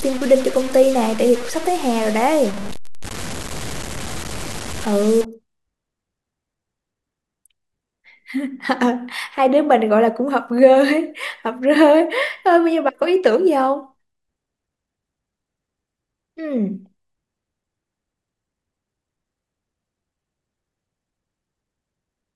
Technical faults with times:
0.00-5.25 low bit depth without dither

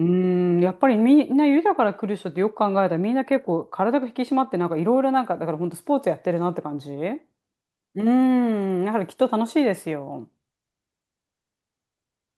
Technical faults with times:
none

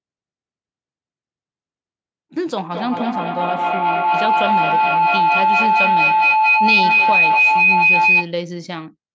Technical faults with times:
2.71-8.37 feedback howl

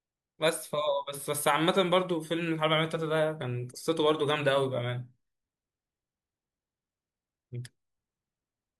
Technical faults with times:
none

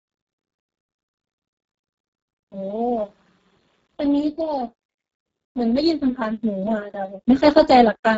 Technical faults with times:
0.00-8.18 Speex codec
4.40 bit error spike

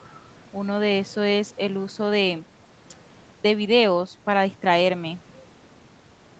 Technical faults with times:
none

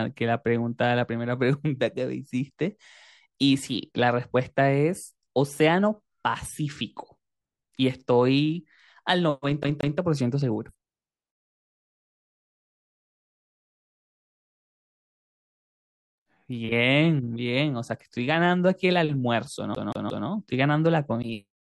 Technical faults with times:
9.63-9.98 CD stuck on one turn
19.75-20.28 CD stuck on one turn

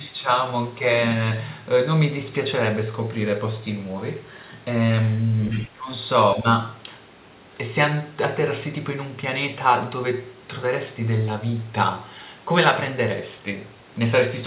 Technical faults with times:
5.51-5.67 other side's voice leaking through
5.68-5.89 speech suppressed in double talk
6.42-6.46 speech suppressed in double talk

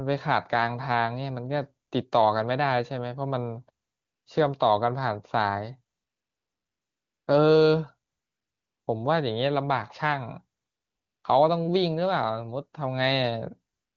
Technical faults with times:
1.87-1.91 AMR comfort noise
3.85-4.25 AMR comfort noise
5.95-7.27 AMR comfort noise
8.09-8.87 AMR comfort noise
10.59-11.23 AMR comfort noise
13.73-13.96 AMR comfort noise

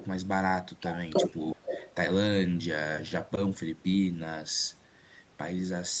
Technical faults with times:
1.52-1.94 echo leak

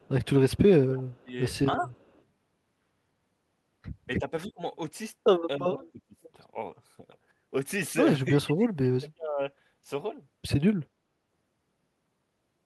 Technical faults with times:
0.00-0.26 echo leak
0.53-1.34 speech suppressed in double talk
1.11-1.20 echo leak
1.78-1.89 speech suppressed in double talk
1.91-2.17 echo leak
4.18-4.61 speech suppressed in double talk
5.58-6.16 speech suppressed in double talk
8.29-9.40 speech suppressed in double talk

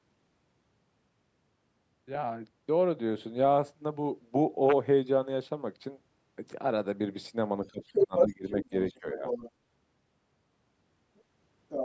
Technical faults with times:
7.67-8.74 speech suppressed in double talk
7.83-8.99 other side's voice leaking through
9.00-9.24 speech suppressed in double talk
9.26-9.51 other side's voice leaking through
11.17-11.21 other side's voice leaking through
11.69-11.85 other side's voice leaking through

